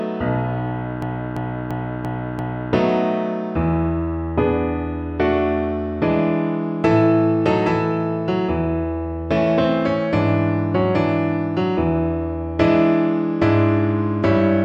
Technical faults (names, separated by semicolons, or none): system hang loop